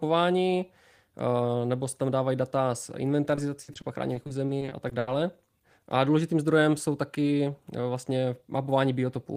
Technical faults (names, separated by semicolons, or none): repeated packet loss (robotic sound)